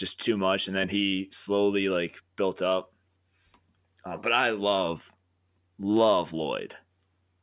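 No technical faults are audible.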